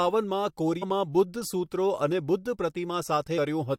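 At about 0.82 s and again at 3.37 s the speech is broken by damaged data in the compressed stream. The decoder misreads corrupt frames and loses sync, producing a brief glitch. Each appears as a narrow disruption on a spectrogram and waveform.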